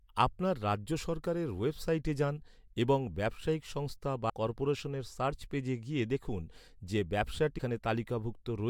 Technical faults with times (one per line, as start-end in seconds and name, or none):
4.29-4.31 broken MP3 bit reservoir
7.57-7.60 broken MP3 bit reservoir